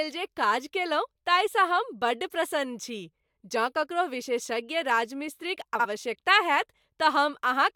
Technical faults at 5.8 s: frames out of order

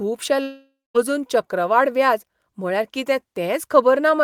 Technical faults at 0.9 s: long network dropout

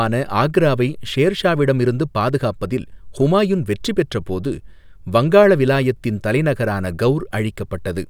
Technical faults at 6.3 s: none

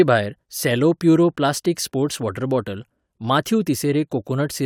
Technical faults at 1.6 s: none

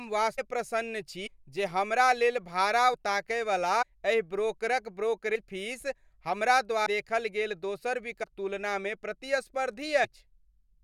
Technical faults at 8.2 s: compressed frames skipped

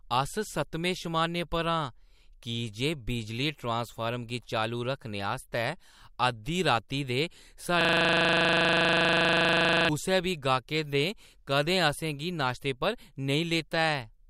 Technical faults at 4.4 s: none

